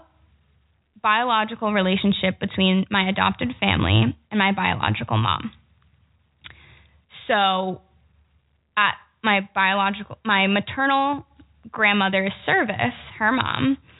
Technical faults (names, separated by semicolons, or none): none